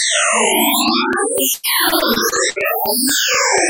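From 0.88 s to the end, a train of clicks runs through the audio. This is likely interference from nearby equipment or a faulty connection injecting the same sharp pulse over and over. The result is a steady ticking at about 4.1 clicks per second, evenly spaced, with peaks around 5 dB above the underlying sound. The ticking stays just as audible in the quieter moments, sitting on top of everything rather than blending in.

Between 1.53 s and 2.58 s, repeated packet loss hits the stream. Packets keep arriving late or not at all, and each hole is patched by stretching out the sound that came just before it. About a quarter of this one-second stretch is made up this way, and the longest hole is 100 ms. The sound turns choppy, and short pieces drop out entirely while the clicks continue underneath.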